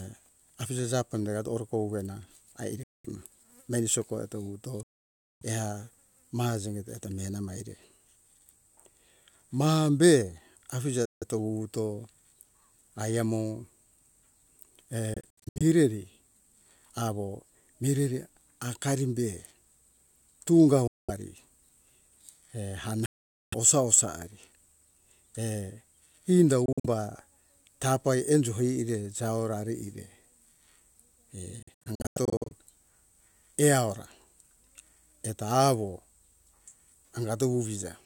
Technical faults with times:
2.83-3.06 Bluetooth dropout
4.83-5.43 Bluetooth dropout
11.05-11.24 Bluetooth dropout
15.14-15.62 Bluetooth dropout
20.87-21.10 Bluetooth dropout
23.06-23.54 Bluetooth dropout
26.66-26.86 Bluetooth dropout
31.63-32.53 Bluetooth dropout

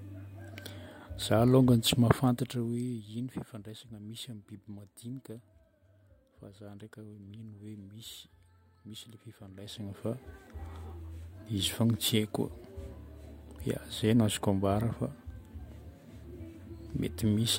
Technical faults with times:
none

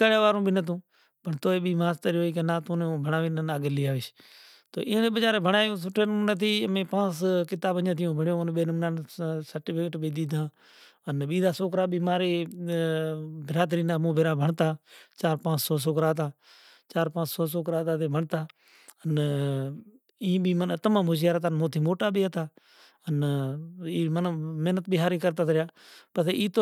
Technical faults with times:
none

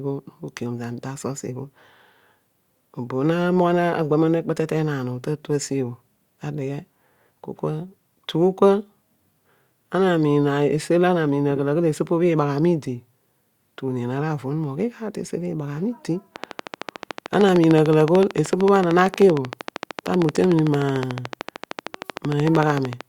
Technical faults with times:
16.36-23.02 train of clicks

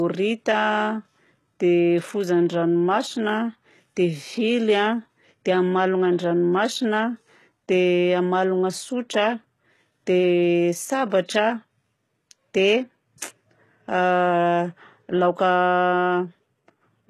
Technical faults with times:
0.00-17.10 low-bitrate audio saved at a high bitrate

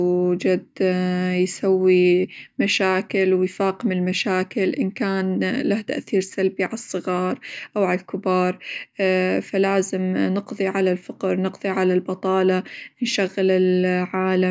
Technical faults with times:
none

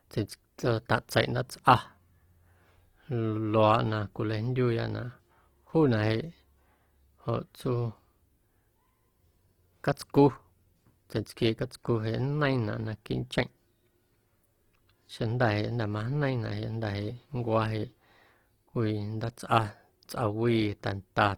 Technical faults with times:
0.00-21.37 Opus compression

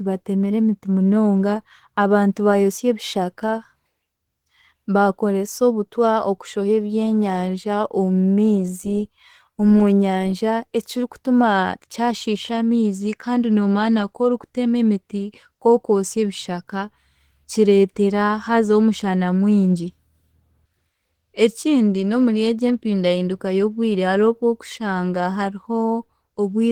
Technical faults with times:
0.00-26.72 Opus compression

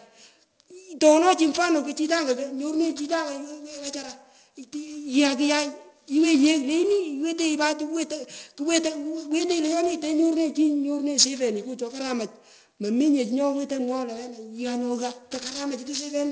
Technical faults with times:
0.00-16.31 aliasing

